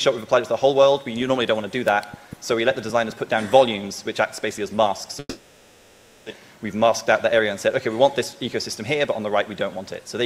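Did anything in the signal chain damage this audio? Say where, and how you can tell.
Yes. A long network dropout runs from 5.19 to 6.41 s. The last sound before the gap is stretched into a buzzy, fading continuation, then settles into near-silence with a brief fully silent moment of about 30 ms. When the audio returns, about a second of material is simply missing and the timing has shifted by roughly 70 ms. This points to the network stage, likely a burst of lost packets that the receiver's concealment papered over before resynchronising.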